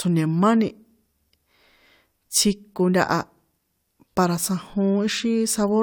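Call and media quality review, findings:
Nothing stood out on listening to this speech recording.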